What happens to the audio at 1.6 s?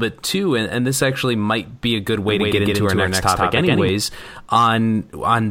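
Nothing goes wrong at 1.6 s: the speech runs straight through that moment with no dropout, click, distortion or other fault.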